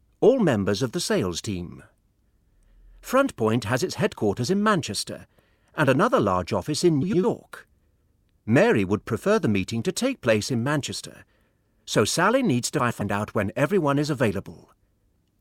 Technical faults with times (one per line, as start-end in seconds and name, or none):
7.02-7.24 frames out of order
12.80-13.02 frames out of order